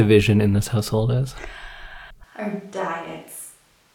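A switch to a distant microphone occurs at 2.24 s and lasts to the end. The speech suddenly turns roomy and hollow, thinner in the bass and roughly 10 dB quieter, with room noise around 30 dB below it, likely because the close microphone's signal dropped out.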